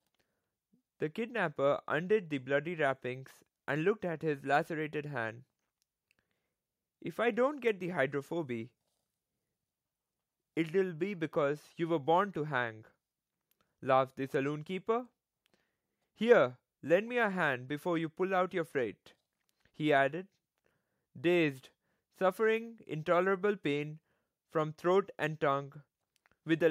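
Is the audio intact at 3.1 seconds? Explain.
Yes, the speech at 3.1 seconds is intact, with no dropout, click, distortion or other fault to be heard at that point.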